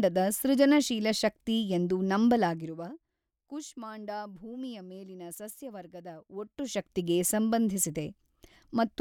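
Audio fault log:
Nothing to log here, as the speech comes through without a single fault worth noting.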